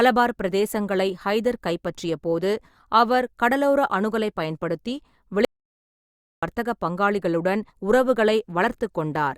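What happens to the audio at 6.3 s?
At 6.3 s the speech has vanished into dead digital silence with no room tone at all. This audio dropout to silence runs from 5.45 to 6.43 s, about 0.98 s. The likely cause is lost input, with the recorder writing zeros meanwhile.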